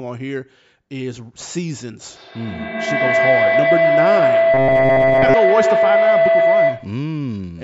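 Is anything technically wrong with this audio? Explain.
Yes, there are two faults. From 2.1 to 7.06 s there is feedback howl: a microphone-to-loudspeaker loop gains level on each pass, building a tone around 700 Hz that pulses roughly every 150 ms and peaks about 7 dB above the speech. From 4.54 to 5.34 s there is robotic sound from repeated short buffers, likely caused by late audio being covered by replaying roughly 7.5 ms fragments in place of most of the real signal. This imposes a rigid, metallic 134 Hz buzz. The call's microphone processing, which takes out the lowest bass, is working normally.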